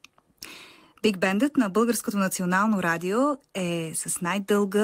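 No dropouts, glitches or level problems are audible anywhere in the clip.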